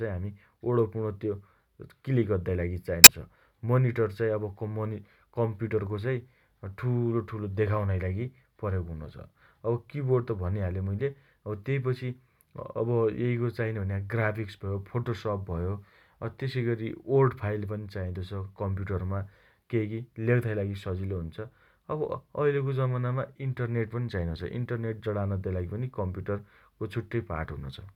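A speech clip with one short burst of damaged data in a compressed stream, from 3.04 to 3.09 s, right after "अद्दाइ लागि". For about 50 ms the decoder reads corrupted frames, loses sync and hunts for the next valid header. That frame-level loss of sync sets it apart from a network dropout, which leaves a silent or smoothly concealed gap instead.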